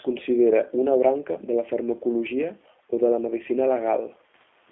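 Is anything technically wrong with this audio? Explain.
Yes. The speech carries G.729 codec damage for the whole clip. The codec rebuilds each 10 ms frame from a vocal tract filter, a pitch predictor and a few pulses, so the voice comes out rough and slightly synthetic, at a rate that fits 8 kbit/s. Nothing sounds below about 300 Hz or above 3.5 kHz. A simple telephone band filter would narrow the sound in the same way but keep it smooth. The buzzy, artificial texture is what marks this as the codec. The faint room noise, about 44 dB below the speech, is part of the recording.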